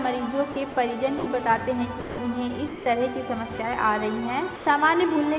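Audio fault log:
0.52 s, 0.72 s, 1.18 s, 2.0 s, 2.68 s and 4.56 s, sound dropped by the voice detector: gaps of 40, 40, 80, 180, 180 and 100 ms give way to steady noise, likely comfort noise after the sender's detector judged the sound as background. This differs from packet loss concealment because the gaps hold flat noise rather than smeared repeats of the preceding sound, and that noise sits within the call path's band, which stops at 4 kHz.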